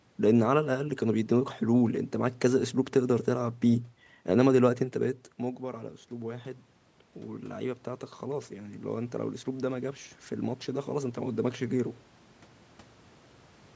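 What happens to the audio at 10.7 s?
At 10.7 s the automatic gain rising is under way, from 8.24 to 12.0 s. The input dropped by about 13 dB. The gain climbs about 6 dB, so voice and background swell together.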